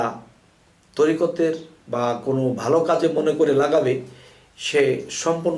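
No technical faults can be heard anywhere here.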